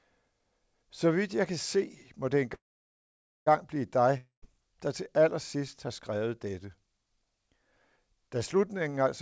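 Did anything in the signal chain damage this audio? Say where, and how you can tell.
Yes. A call audio freeze at the network stage, likely delayed packets draining the jitter buffer: after "må det", 2.54 to 3.48 s, the sound trails off into about 0.87 s of silence, then resumes intact.

A long network dropout, likely lost packets, from 4.17 to 4.44 s: the sound decays into silence and returns at "der til allersidst har" with about 0.26 s missing.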